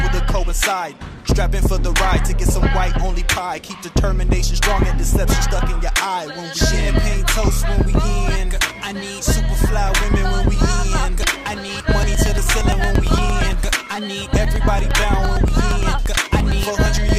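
From 11.23 s to 17.09 s the audio is broken by periodic USB or driver dropouts: something stalls the USB link or audio driver every 0.115 s, and each time around 10 ms of signal is skipped outright, so the waveform jumps ahead and leaves a click. Roughly fifty of these land in a strict, metronome-like rhythm, heard only while sound is present. That fixed spacing is what separates it from network packet loss, whose gaps fall irregularly.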